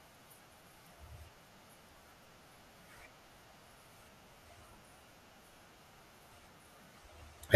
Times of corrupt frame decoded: none

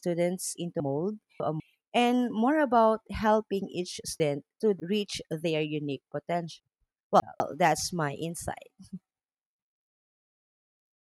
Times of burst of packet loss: none

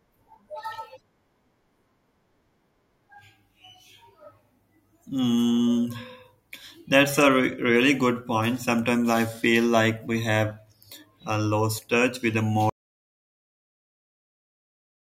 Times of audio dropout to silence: 12.69-15.14

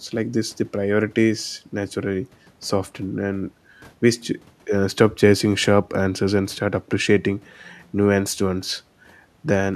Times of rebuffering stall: none

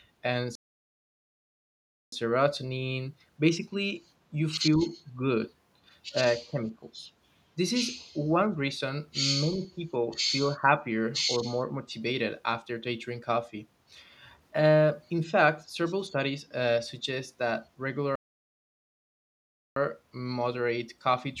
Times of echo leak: 8.00-8.06

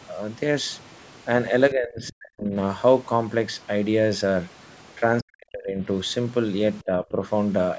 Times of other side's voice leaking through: 0.00-0.06, 0.73-1.05, 2.07-2.13, 3.54-3.67, 4.68-4.76

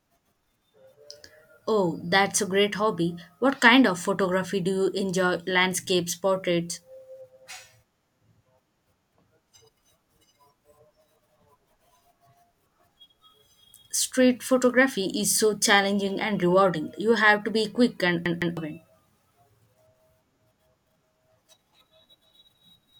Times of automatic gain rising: none

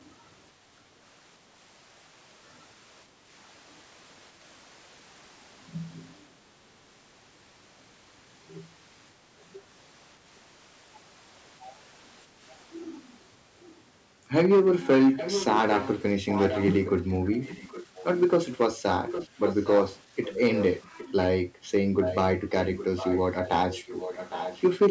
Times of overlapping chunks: none

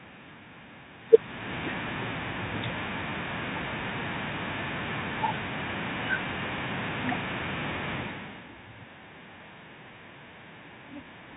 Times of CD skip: none

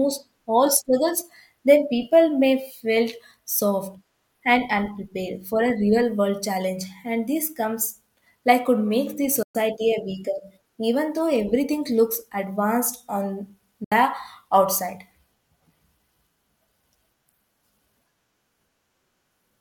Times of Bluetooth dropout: 9.43-9.55, 13.84-13.92

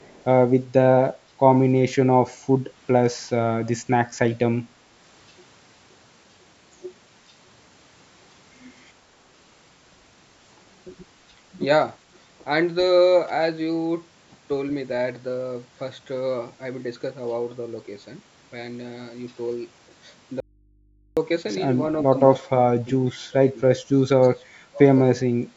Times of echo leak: 0.00-0.24

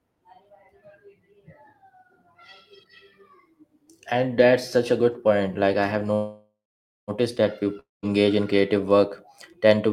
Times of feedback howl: none

